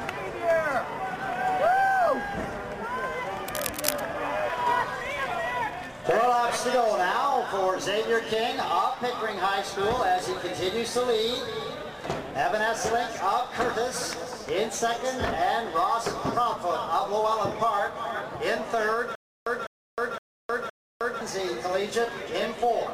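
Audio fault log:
3.48–4.01 s, cable scratch noise: a burst of dense, uneven scratching and rustling sits on top of the sound for about half a second, at a level around 5 dB below the signal. The irregular texture points to a changing contact resistance, likely from a worn cable, connector or control carrying DC being moved. Each jump in resistance modulates the current and injects a crackle of noise into the signal path until the movement stops.
19.15–21.21 s, stutter with silent gaps: a fragment of about 203 ms plays, then about 312 ms of digital silence follows, and the pair repeats on an even period of about 515 ms, four repetitions in all. This pattern likely comes from the player or stream stalling. On each retry it replays the last buffered fragment and then runs dry, which produces the regular repeat-and-drop rhythm. The audio that should have filled this stretch never plays.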